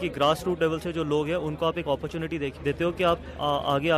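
Sample clock jitter runs through the whole clip: the converter's clock wanders by a few microseconds, so each sample lands slightly off time. The resulting grainy hiss sits roughly 35 dB under the signal and swells on loud, bright passages, unlike a steady noise floor, which persists through silence.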